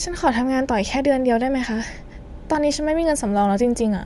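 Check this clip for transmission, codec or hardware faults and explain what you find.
One codec fault runs through the whole clip; no transmission dropouts or hardware faults stand out.

Bluetooth LC3 compression, throughout: the speech has plainly audible codec damage, most likely from LE Audio's LC3 transform codec. It splits the signal into short frames, which fits a 10 ms framing at roughly 48 kbps, and spends bits only where the spectrum matters most, replacing sparse upper detail with synthetic noise. The voice takes on a breathy, grainy edge.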